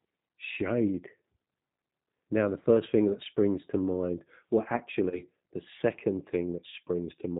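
Throughout, the speech sounds slightly rough and synthetic, with nothing above 4 kHz. That plainly audible damage comes from the G.729 codec (the G.729A variant, fitting an 8 kbit/s stream), which rebuilds speech from a vocal tract filter, a pitch predictor and a few pulses per frame rather than the actual waveform.

From 5.10 to 5.21 s the voice briefly smears into a stretched tone or coloured noise that fades, and then sounds weak or distorted before recovering. This is VoIP packet loss concealed by the speech codec. The gap points to two lost 10 ms frames, 20 ms in all. The decoder filled them by extrapolating its last pitch and filter at falling gain, and because each frame builds on the previous one, the distortion lingers until about 5.21 s.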